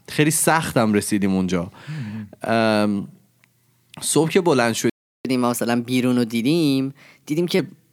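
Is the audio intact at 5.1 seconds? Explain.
No. A playback stall silences the speech from 4.90 to 5.25 s, about 350 ms. The player likely ran short of data. Playback then resumes.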